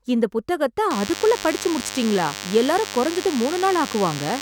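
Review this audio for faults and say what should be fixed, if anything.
There's DECT cordless phone buzz from 0.90 s to the end: a DECT unit pulsing every 10 ms gets rectified, leaving a thin 100 Hz buzz roughly 10 dB under the speech. Move DECT handsets and bases well away from the mic and preamp, and use shielded, balanced cabling.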